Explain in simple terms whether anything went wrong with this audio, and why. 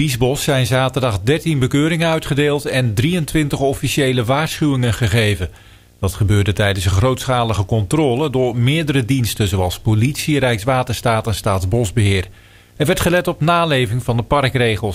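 Video or display buzz, start to finish: a screen or video cable leaks in, adding a faint 59.94 Hz buzz and a 15.7 kHz whine.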